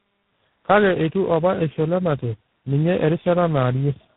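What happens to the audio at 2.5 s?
At 2.5 s the speech carries tandem speech coding, which runs through the whole clip rather than starting there. It sounds like a call that was decoded and re-encoded by four speech codecs in a row, ending in something like G.726 at 24 kbit/s. Each stage codes the previous stage's errors along with the speech, so the damage compounds. The result is rough, muffled and warbly, with nothing above 3.8 kHz.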